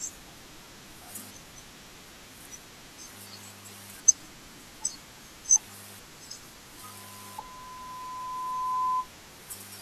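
From 6.77 s a single steady tone at 1 kHz rises out of the speech, swelling over roughly two seconds until it sits well above the voice, around 10 dB louder, before stopping at 9.09 s. This is loudspeaker feedback squeal: the microphone was picking up the loudspeaker it fed, and at 1 kHz the loop's gain exceeded one, so that frequency kept reinforcing itself.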